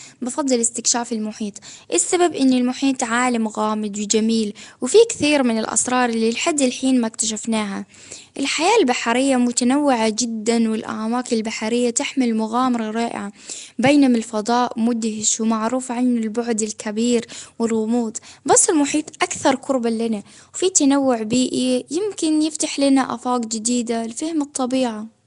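Right through the speech there's a rough, hissy halo and a smeared, underwater quality. The top end stops at about 10.6 kHz. That's likely Nellymoser compression, the old Flash codec, filling starved bands with noise, at a rate that fits around 44 kbps.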